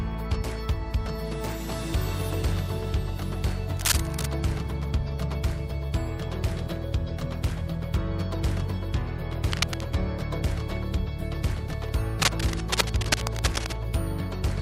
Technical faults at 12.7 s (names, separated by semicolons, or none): cable scratch noise